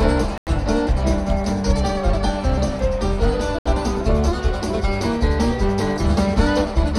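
A Bluetooth stall occurs at 0.38 s and again at 3.59 s. The sound cuts abruptly to silence for 91 ms, until 0.47 s, and later for 69 ms, until 3.66 s, before playback resumes. The likely cause is radio interference delaying wireless packets: the receiving device's buffer empties, output halts, and audio restarts only once the retransmitted data arrives, leaving brief dead gaps in an otherwise continuous stream.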